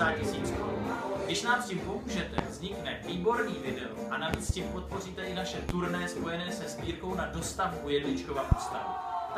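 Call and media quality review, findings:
Loud pop, five pops in four events: 2.38–2.41 s, a double pop across 4.34–4.52 s, 5.69–5.72 s, and 8.52–8.55 s. Peaks roughly 25 dB above the signal, roughly 20 dB at 5.69 s. Audio continues underneath each. Likely cause: a voltage step or pulse from a plug, switch, static or driver glitch, summed into the path and shaped by downstream circuitry. Waveform: isolated spikes standing far above the envelope. Spectrogram: thin full-band vertical lines.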